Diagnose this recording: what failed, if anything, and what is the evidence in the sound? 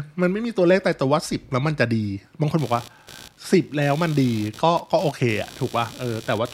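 Computer activity noise in the analogue wiring: from 2.58 s to the end, a buzzy pulsing at around 70 Hz sits roughly 20 dB under the speech as computer load changes disturb the shared ground.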